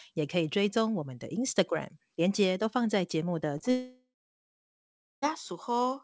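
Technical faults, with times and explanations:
3.58 s and 3.61 s: short concealed packet loss. Two consecutive 20 ms gaps were filled by extending the preceding sound, leaving a brief smear before the real audio resumes.
3.71 to 5.24 s: long network dropout, likely. Audio stops arriving for about 1.5 s; the concealment buzz fades, then roughly a second of silence follows before sound returns without the missing portion.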